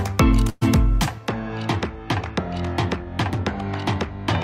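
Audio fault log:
0.49–0.63 s, burst of packet loss: the sound stops moving forward and the last moment is drawn out for about 118 ms, growing weaker, with no silent gap. It then picks up again slightly further on, about 120 ms of the original missing. Several consecutive packets, or one long one, never arrived in time, so the receiver covered the hole by continuing and fading what it last had. It then skipped ahead, losing the stretch in between.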